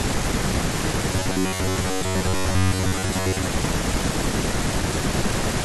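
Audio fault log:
1.13–3.50 s, robotic sound from repeated short buffers: new audio likely arrives too seldom, so playback fills the gaps by looping a stretch of about 10.7 ms and skips most of the real signal. This imposes a rigid metallic buzz near 94 Hz that only loosely follows the speech.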